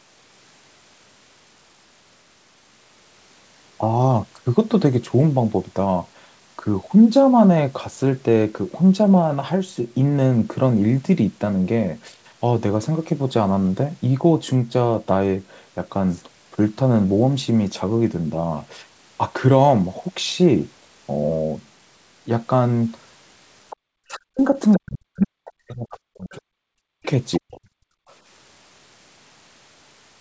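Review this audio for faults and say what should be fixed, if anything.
Other side's voice leaking through: faint scraps of a second voice turn up at 23.70–23.77, 24.71–25.27, 26.31–26.36, 27.03–27.38 and 28.08–28.15 s, sitting roughly 15 to 35 dB under the talker. That's likely loudspeaker playback the echo canceller didn't fully scrub from the mic. A headset, or turning the speaker down, would keep it out.

Speech suppressed in double talk: from 24.04 to 27.6 s the talker keeps dipping and breaking up, for about three seconds in total, dropping by around 40 dB at worst, right while that other voice is bleeding in. Most likely the canceller couldn't tell near-end speech from echo when both sides talked at once, so it ducked everything. Better double-talk detection in the canceller, or a headset, would fix it.

Background gated by the echo canceller: at 27.88–28.08 s the room tone drops out for about 200 ms, down by about 37 dB, then comes back. 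That's the canceller clamping the mic hard while the speaker plays. A gentler suppression setting would smooth that over.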